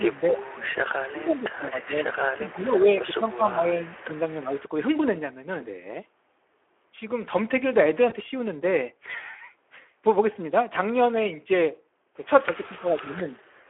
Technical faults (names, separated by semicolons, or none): Speex codec; echo leak; speech suppressed in double talk; VoIP packet loss concealed by the speech codec